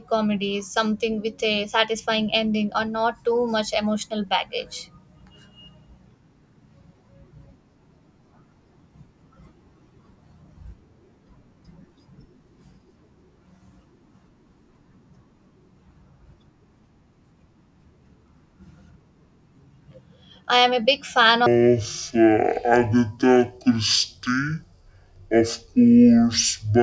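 Wrong sample rate from 21.46 s to the end, right after "big fan". The speech slows to half speed and drops 12 semitones, a full octave, sounding low and dragged. That fits audio recorded at 32 kHz being played back at 16 kHz without conversion.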